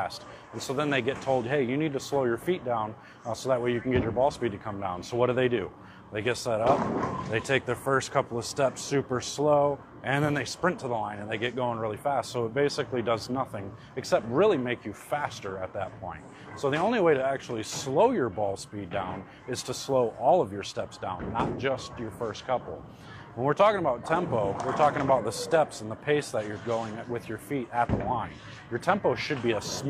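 Nothing in this one trips any alarms: there's no dropout, glitch or other technical fault anywhere along the way.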